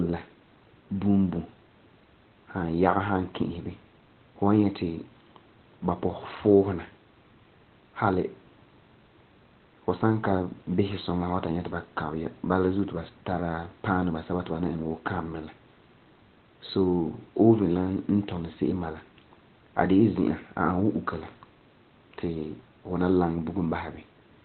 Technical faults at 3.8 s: Opus compression

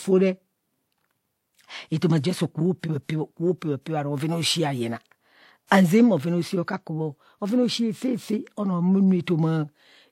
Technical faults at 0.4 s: transcoding between lossy codecs

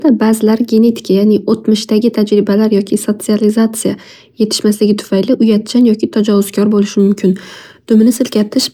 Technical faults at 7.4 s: crude rate conversion

